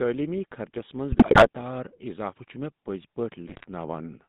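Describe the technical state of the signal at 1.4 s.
At 1.4 s the sound sits inside a burst of GSM bit errors running from 1.11 to 1.48 s. Corrupted bits are reaching the decoder, so the filter, pitch and gain values it rebuilds each frame are wrong. The spectrum warps and the level jumps, giving squawks, pops and gargling. The damage fits roughly fifteen spoiled frames and an error rate near 6 percent. It differs from packet loss because nothing goes silent or repeats: the decoder keeps producing sound, just garbled sound.

Under that burst, and across the whole clip, is the GSM full-rate codec, with plainly audible damage that fits a 13 kbps stream. The speech is rebuilt from a vocal-tract model driven by coarse, regularly spaced pulses, which makes it buzzy and gravelly. The line band runs from about 150 Hz to 3.7 kHz. That raspy excitation, and not only the narrow bandwidth, is what separates this codec from a plain telephone band-limit, which would sound dull but smooth.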